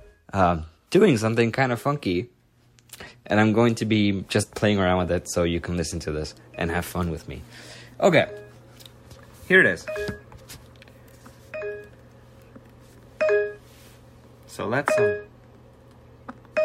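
At 4.39 to 4.43 s, compressed frames are skipped. About one frame, roughly 50 ms of sound, is lost. The audio jumps ahead by that much.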